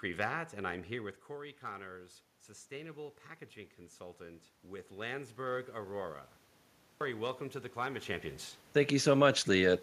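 Automatic gain rising, from 3.98 to 6.24 s in this speech recording: the input level drops by about 13 dB, and the gain control responds by slowly lifting its gain about 4 dB over two seconds, so the voice and background swell together. A clipped start after a pause follows at 6.82 s. After a 0.46 s gap, the output device has dropped into sleep and needs about 190 ms to wake, which swallows the opening sounds of "welcome to the" so they begin abruptly out of silence.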